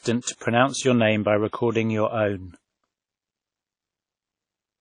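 Throughout, the speech rings and smears, with hiss pumping alongside syllables and nothing above 10 kHz. This is likely WMA compression near 32 kbps, spreading noise further than MP3 pre-echo.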